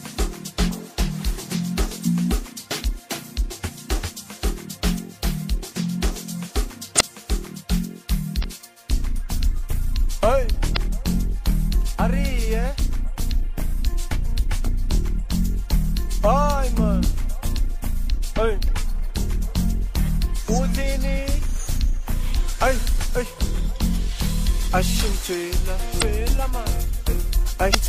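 At 6.96, 8.40, 10.73, 25.98 and 27.71 s, damaged data in the compressed stream produces brief blips of roughly 40 to 50 ms each. Corrupted bytes make the decoder misread those frames and lose sync until it locks onto the next valid frame header.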